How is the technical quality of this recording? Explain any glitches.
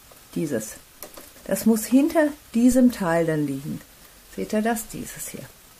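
One real glitch here, a phantom power thump at 2.72 s that rings out by about 2.89 s. What's happening is a supply getting switched on a live input, and that sudden voltage step pushes straight through the coupling capacitors into the signal. You hear it as a low, deep thump peaking at about −19 dBFS. It dies away fast, with a decay of roughly 38 ms, so it's a short dull knock.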